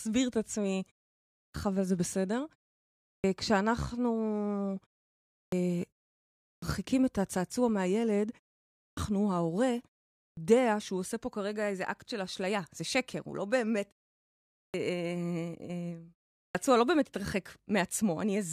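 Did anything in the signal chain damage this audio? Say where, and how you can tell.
Yes. A clipped start after a pause occurs at 1.34, 3.03, 5.33, 6.45, 8.77, 10.18, 14.55 and 16.37 s, at the playback stage. Each time, speech resumes after a gap of 0.3 to 0.7 s and the first 170 to 210 ms are missing, so words jump in abruptly without their opening sounds. The output device sleeps during silence and must wake or relock before sound passes again, swallowing the onset.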